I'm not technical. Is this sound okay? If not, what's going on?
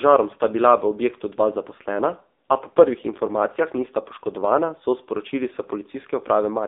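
No. From start to finish the speech has passed through the AMR narrowband mobile codec, the squeezed format used for older mobile phone calls. It keeps only a thin slice of sound, roughly 250 Hz to 3.7 kHz, so the voice loses its body and all its crispness. The codec rebuilds speech from a simplified model of the voice, and the heavy squeezing here leaves it buzzy and synthetic, like a poor phone line.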